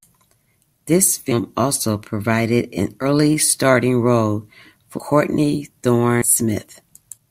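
Sudden jumps forward fall at 1.31–1.34 s before "also provided an", 3.01–3.06 s before "starring role", 4.97–5.00 s, 6.21–6.26 s and 7.17 s. Compressed frames were skipped: runs of 20 ms frames went unplayed, losing about 100 to 300 milliseconds each time.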